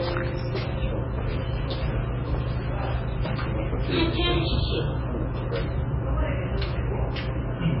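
A recording of sounds, watery and swirly throughout, with smeared attacks. A spectrogram shows a hard ceiling at 5.6 kHz, likely from heavy MP3 compression at a very low bitrate.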